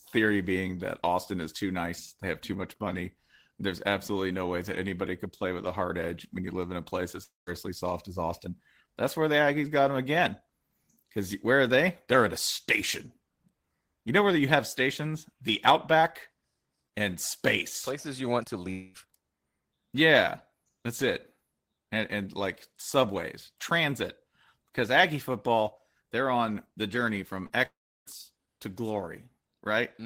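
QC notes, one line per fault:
7.23–7.50 s, 18.71–18.97 s and 27.66–28.09 s, long network dropout: a quarter second lost at the first two and 0.4 s at the third, likely a stalled stream. The last sound stretches into a fading buzz, then about 0.15 s and 0.32 s of silence at the first and third. At 18.7 s it never goes fully quiet. Audio resumes with the gap missing.
27.46–27.53 s, short concealed packet loss: about 40 ms arrived too late for the decoder, so the receiver extended the preceding sound and blended back into the real audio. You hear a quick smear right before the longer dropout at 27.66 s.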